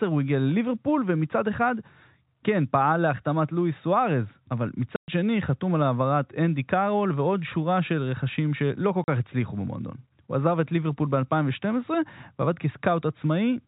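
A speech recording over a telephone-band G.711 path, with nothing heard above 4 kHz, is broken twice by packet loss filled with silence. The sound drops out completely from 4.96 to 5.08 s, a 120 ms gap, and again from 9.04 to 9.08 s, about 40 ms. Both gaps start and stop abruptly. Their lengths fit whole 20 ms packets going missing, with the receiver inserting silence instead of concealing the loss.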